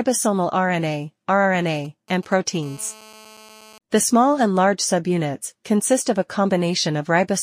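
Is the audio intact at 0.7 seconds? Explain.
Yes, at 0.7 seconds the audio is intact, with no dropout, click, distortion or other fault to be heard there.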